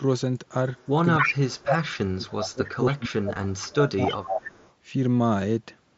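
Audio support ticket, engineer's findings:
Far-end echo canceller, likely incomplete: loudspeaker pickup passed back to caller. Delayed copy 275 ms behind, at 0.77–0.89, 1.18–1.35, 1.59–1.98, 2.27–2.32, 2.51–2.69 and 4.07–4.72 s. Echo leak level ranges from barely audible to roughly as loud as the talker.

Same echo canceller, likely unable to separate talker from loudspeaker echo during overlap, attenuating both. Speech suppressed in double talk at 1.17–1.59 and 2.04–4.20 s: talker's level dips by up to around 30 dB, about 2.4 seconds affected in total.

Headset-to-phone Bluetooth link dropped 7.5 ms of audio at 3.35 s, which fits a single lost frame. Receiver patched the gap with a repeat of recent waveform. Concealed Bluetooth headset packet loss is nearly inaudible here. The mSBC codec carries the link with light graininess.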